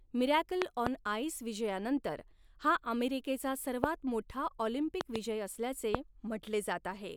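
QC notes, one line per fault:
0.62–0.89 s, 3.84–3.86 s, 5.01–5.18 s, 5.95–5.97 s, loud pop: sharp thumps far above the speech, doubled at 0.62 s (before "आइस' विजयानंतर हा अमेरिकेचा") and 5.01 s, single at 3.84 s (after it) and 5.95 s. Speech continues underneath with no gap or dropout. Likely voltage spikes from a plug, switch or static.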